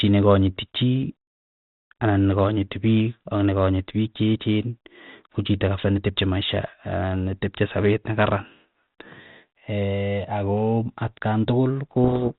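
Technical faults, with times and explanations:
12.04 to 12.31 s, codec payload misread: for roughly a quarter of a second the speech is buried under harsh, rasping distortion, because the receiver takes the bits of each G.726 code word in the wrong order and rebuilds the signal from wrong difference values. The lightly coloured band-limited sound of the 32 kbit/s G.726 link turns into grinding noise. On a spectrogram the band below 4 kHz fills with dense, smeared energy, and the waveform turns ragged and spiky.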